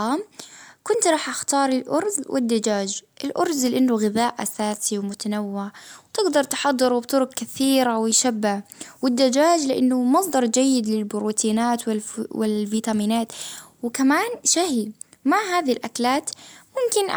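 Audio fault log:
The speech signal shows no audible technical faults at any point.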